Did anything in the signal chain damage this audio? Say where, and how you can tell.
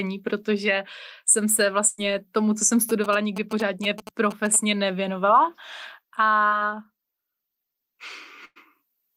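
Yes. Network stage: bursts of packet loss at 1.87–2.00 s and 8.45–8.58 s. Concealment stretches the last sound about 100 ms and fades it, and the second burst ends in roughly 30 ms of silence.

Analogue wiring: GSM signalling bursts from 2.89 to 4.56 s, a galloping tick-and-buzz pattern at 217 Hz about 10 dB under the speech, from a nearby phone's rectified radio bursts.

Network stage: short concealed packet loss at 6.48–6.53 s. About 40 ms never arrived, and the decoder's roughly 33 ms fill leaves a brief smear before the real audio resumes.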